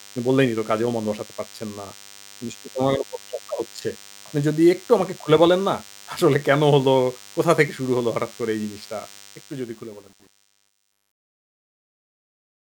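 A speech clip with two faults. A DECT cordless phone buzz runs throughout, a thin 100 Hz buzz rich in harmonics, well below the speech. A nearby handset's radio bursts are being rectified. Truncation distortion on a fade appears from 9.20 s to the end, as the level fades out. The tail turns gritty, worst from 9.77 s, which points to a fade stage keeping only about 9 bits without dither.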